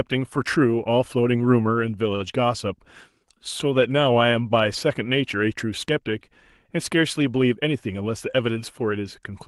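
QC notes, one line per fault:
7.53–8.02 s, jitter buffer speed-up: the speech briefly hurries, running at 108% speed with its pitch unchanged. The receiver's jitter buffer was holding more audio than its target, so it trimmed repeated slices one or a few pitch periods long, removing around 50 ms in total.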